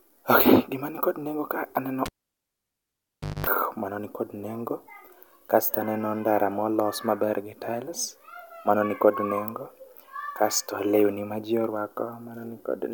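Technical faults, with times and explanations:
2.06 to 3.47 s, cable pulled and plugged in: there's a pop at 2.06 s as the live lead comes out, then the speech is gone for 1.36 s. Near silence ends with 0.22 s of 50 Hz mains buzz, because only the plug tip is touching and the shield isn't grounded yet, so the open input picks up hum. A second pop lands as the plug seats fully, and the speech returns at 3.47 s.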